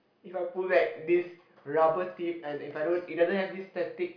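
No technical faults are audible anywhere in the speech.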